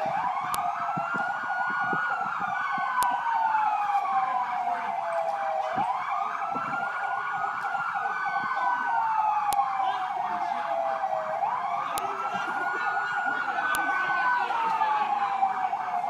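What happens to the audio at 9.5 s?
At 9.53 s a new segment of audio was spliced on with its WAV file header still attached, so the player treated those few dozen bytes of format and size information as if they were sample values. The result is a file header played as audio: a single sharp, loud click or snap lasting only about a millisecond, landing abruptly regardless of what the surrounding sound is doing at that instant.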